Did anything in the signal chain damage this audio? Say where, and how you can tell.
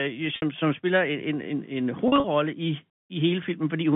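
Yes, at the network. Packet loss with pitch repetition at 0.36–0.42 s and 2.08–2.24 s: lost packets are bridged by repeating the last pitch period, giving brief held buzzes.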